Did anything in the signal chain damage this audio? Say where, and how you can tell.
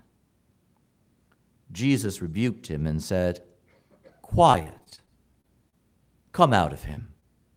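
Yes, at the network stage. From 4.51 to 5.74 s the speech turns choppy: eleven separate holes, the longest 34 ms, with about 18% of that span rebuilt by extending the preceding sound. That is repeated packet loss. Unlike a buffer dropout, the gaps are smeared over rather than silent.

There is also short concealed packet loss at 6.94 to 6.98 s and 7.20 to 7.24 s. Each time about 20 ms failed to arrive, and the receiver patched it by continuing the last pitch or noise, heard as a brief smear or wobble. These are isolated single events, not a sustained burst.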